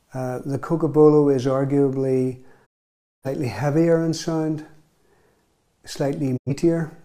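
A digital broadcast dropout occurs twice. The receiver stopped getting decodable frames and muted its output until valid ones resumed, so the programme material sent in the meantime is gone. From 2.65 to 3.27 s the sound fades out over about 20 ms into a silent hole of roughly half a second, consistent with around thirteen lost frames. A shorter gap at 6.36 to 6.51 s fades the same way and loses roughly 85 ms.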